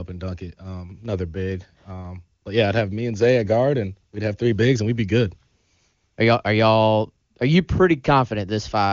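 No technical faults are audible.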